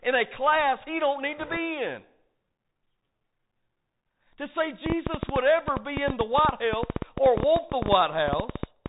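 Throughout, the speech passes through a Bluetooth CVSD headset codec at 64 kbps. Its one-bit, adaptive-step coding cuts everything above 4 kHz and lags on loud, bright sounds, so s sounds turn scratchy and a plainly audible granular hiss sits under the voice.

From 1.38 to 1.57 s, just after "class he don't need", bit errors on a Bluetooth voice link flip some of the transmitted bits, at a rate of around one and a half percent. Because each bit carries only a small step, this brings a brief rushing crackle rather than loud clicks.

From 4.86 to 8.87 s, a train of clicks, likely from interference or a struggling interface, injects about 40 similar pulses at an uneven pace of about 9.8 per second. Peaking some 15 dB above the speech, they tick and pop over the voice and through the pauses.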